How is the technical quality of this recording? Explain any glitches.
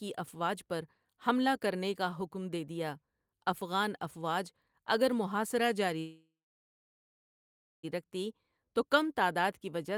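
There is one clear glitch, a call audio freeze from 5.99 to 7.85 s. Packets were likely held up, emptying the jitter buffer. The last sound fades into 1.49 s of silence, then speech resumes exactly where it stopped, with nothing lost.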